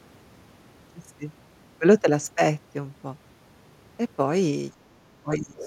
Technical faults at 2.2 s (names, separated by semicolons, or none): none